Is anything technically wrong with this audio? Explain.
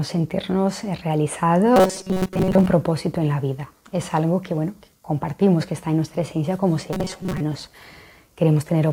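Yes. From 1.76 to 2.66 s and from 6.93 to 7.40 s, robotic sound from repeated short buffers: new audio likely arrived too seldom, so a roughly 5.3 ms slice was looped over most of the signal, imposing a rigid, metallic 188 Hz buzz.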